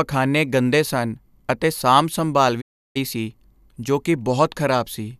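At 2.60 s the speech fades out within 20 ms. It stays silent until 2.97 s. This digital broadcast dropout muted the receiver on bad frames, losing that speech.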